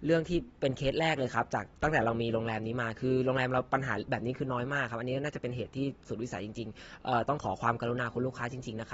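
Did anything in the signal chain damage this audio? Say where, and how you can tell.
Yes, at the codec stage, and the damage runs through the whole speech clip. Nothing is present above 7.7 kHz, and the remaining spectrum sounds dull and smeared, with a warbling, fizzy texture on sustained sounds and sibilants. This is likely AAC compression, with the encoder dropping bands and quantising coarsely to save bits, which fits a low bitrate of roughly 27 kbps. A simple low-pass filter would also cut the top, but it would not add that swirling, fizzy texture below the cut-off.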